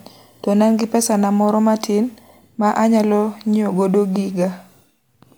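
No technical faults are audible anywhere in this recording.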